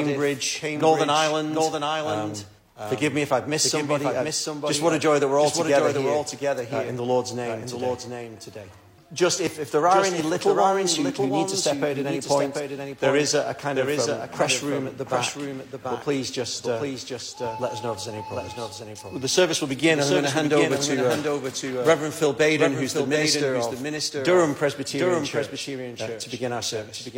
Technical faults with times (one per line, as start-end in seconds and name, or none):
0.00-27.18 doubled audio track